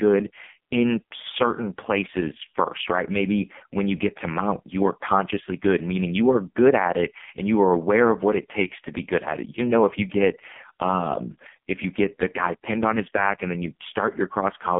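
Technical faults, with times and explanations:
throughout, AMR narrowband mobile codec: the speech sits in a telephone band from about 200 Hz to 3.5 kHz, with nothing above 3.6 kHz, and it sounds heavily buzzy and synthetic, which points to the lowest AMR-NB mode, around 4.75 kbps. The voice is rebuilt from a vocal-tract model driven by sparse pulses, so the tone comes out coarse and robotic. A plain band-limited phone line would sound thin but clean, without this artificial buzz.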